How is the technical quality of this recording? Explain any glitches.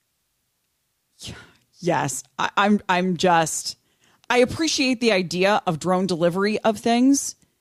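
The recording shows no technical glitches, with the signal holding steady and intact throughout.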